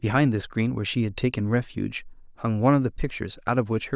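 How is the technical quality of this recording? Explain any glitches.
No technical faults can be heard in the recording; the speech signal stays continuous and intact throughout.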